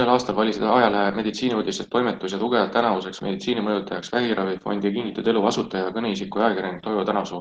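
Opus voice compression runs through the whole speech clip, from start to finish. The speech band stays full-width, but the lower range comes from the linear-prediction coder while a separate transform layer fills in above 8 kHz, and the excitation is coded coarsely. The result is plainly audible: a hoarse, slightly robotic grain. The degree of damage points to a rate around 16 kbps.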